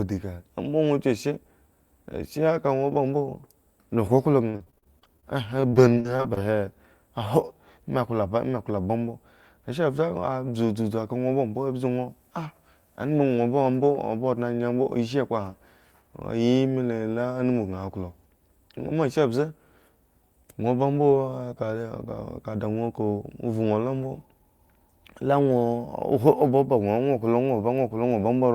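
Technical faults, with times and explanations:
4.49 to 5.24 s and 5.60 to 6.40 s, repeated packet loss (robotic sound): Short gaps arrive in rapid succession, none longer than about 45 ms. Each is patched by stretching the preceding sound, about a third of the first stretch, leaving choppy speech with pieces missing.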